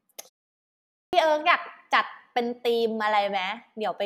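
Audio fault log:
1.07–1.13 s, clipped start after a pause: speech comes back out of silence abruptly, its opening sounds missing, so the word lands already in progress with a hard edge and no natural onset. About 59 ms is swallowed right after a pause of about 0.86 s. The playback device dropped into a low-power or unlocked state during that silence and needed time to wake and resynchronise, so the first part of the returning signal never reached the output.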